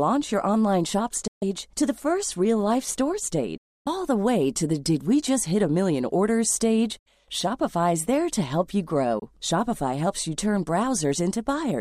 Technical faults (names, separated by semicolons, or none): Bluetooth dropout